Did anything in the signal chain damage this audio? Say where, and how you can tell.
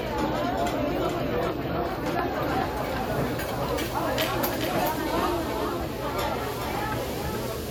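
Yes: a doubled audio track runs throughout, with a dry, full-band copy about 5 dB quieter trailing roughly 0.4 s behind, likely from a second, slower capture path.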